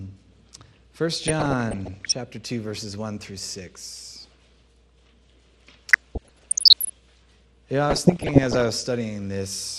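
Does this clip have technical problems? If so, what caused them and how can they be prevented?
Yes. Throughout, the sound is dull and gurgly, most likely from MP2 compression at a low rate, around 80 kbps. Starved upper sub-bands switch off, appearing on a spectrogram as a flickering, ragged top edge. Encoding at a higher bitrate prevents it.

DAB burbling appears from 1.21 to 2.12 s, 5.92 to 6.90 s and 7.90 to 8.74 s as bursts of noise blips in single sub-bands. Error rates somewhat under one percent let bit errors past the error correction into the MP2 data, showing isolated sub-band blocks flaring bright on the spectrogram. Better reception, through a stronger signal or improved antenna, prevents this.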